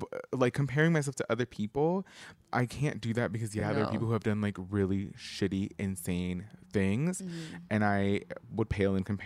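At 3.60 to 3.63 s, between "can't do that because" and "no there are people", and again at 7.63 to 7.65 s, after "shitty insane things mm" and before "and i", the speech stutters where overlapping chunks meet. Each 4.0 s chunk begins about 23 ms before the previous one ended, so that sliver plays twice. Unlike a dropout, nothing is missing. The brief doubling lands at a regular 4 s spacing.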